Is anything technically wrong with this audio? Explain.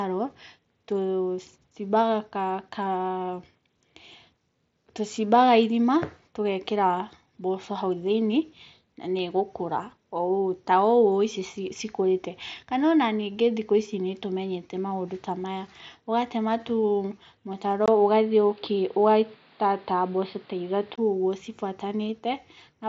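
Yes. From 17.86 to 20.98 s the speech turns dull and boxy, with nothing above 5.1 kHz, faint new background noise, and a 20 ms gap at the start, though loudness stays level. The likely cause is the input switched to a poorer, narrower-band device, while the mSBC headset path carries the rest up to about 7.7 kHz.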